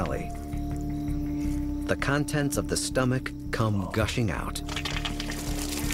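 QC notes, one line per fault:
No faults heard anywhere in this clip.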